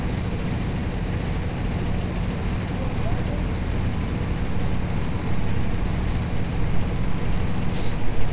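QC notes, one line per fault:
No faults found anywhere in the clip.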